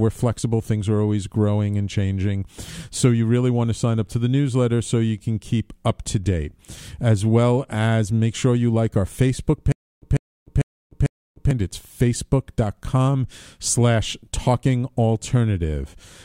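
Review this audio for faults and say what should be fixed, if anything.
From 9.72 to 11.51 s there is a stutter with silent gaps in the speech. A burst of about 149 ms repeats four times, each followed by roughly 299 ms of dead digital silence, giving an even cycle of about 448 ms. The cause is likely a stalled player or stream replaying its last buffered fragment on each retry, so the speech that belonged in those gaps is lost. Unlike a simple dropout, the identical fragment keeps returning, and unlike a skip the timing stays rigidly regular. Prevent it by giving the stream or playback path enough buffering and throughput to avoid underruns.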